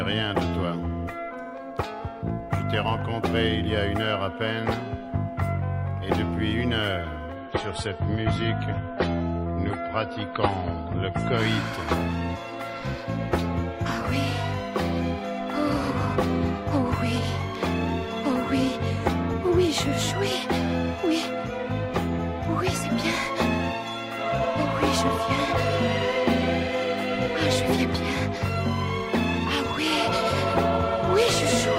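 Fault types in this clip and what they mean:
Adaptive stream at a lower bitrate: the player switched to a leaner encoding of the same stream, so from 7.37 s to 11.37 s the sound loses everything above about 10.8 kHz and takes on a swirly, smeared codec texture, which fits a step down from 128 kbit/s to 32 kbit/s MP3. Unlike a dropout or buffering stall, nothing goes silent and the timing stays unbroken. Unlike a clip encoded at a low bitrate throughout, quality snaps down and then back up abruptly, for a 4-second stretch.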